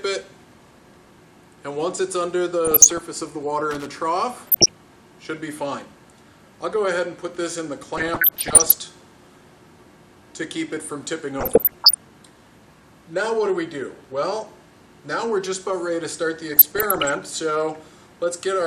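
DAB burbling comes through the sound at 2.65–3.01 s, then 4.45–4.70, 7.97–8.77, 11.38–12.03 and 16.50–17.14 s. Roughly 0.7–1% bit errors slip past error correction, so individual sub-bands blip rather than the whole signal breaking. Loose connector crackle at 3.71–3.87 and 14.04–14.11 s is different: a broadband, irregular scratching as a contact makes and breaks.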